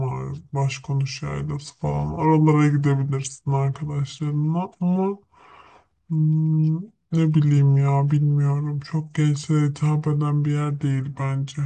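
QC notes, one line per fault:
Throughout, wrong sample rate: the speech runs at 0.726 times normal speed and sits about 5.5 semitones low, which fits 44.1 kHz audio played back at 32 kHz. Because tempo and pitch drop together, it differs from a pitch shift or time-stretch.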